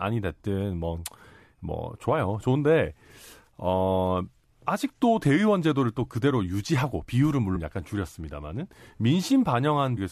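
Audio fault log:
7.55–7.57 s and 9.96–9.99 s: damaged data in a compressed stream. Each event is a brief blip of about 20 ms cutting into the speech. Part of the encoded stream is corrupt at these points. The decoder cannot read those frames correctly. It outputs garbled samples, loses sync, and hunts for the next valid frame header. That short burst of wrongly decoded data is what makes the blip.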